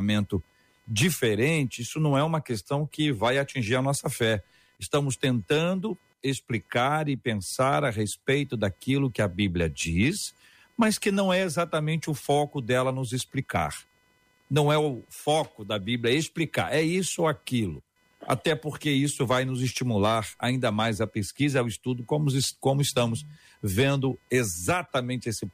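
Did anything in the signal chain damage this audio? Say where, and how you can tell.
Yes, in the analogue wiring. Computer activity noise, a buzzy chirping near 500 Hz some 40 dB below the speech, runs through the whole clip and shifts with the computer's load rather than with the speech. Unlike steady mains hum, it isn't fixed at 50 or 60 Hz, because processor and graphics currents disturb the shared ground.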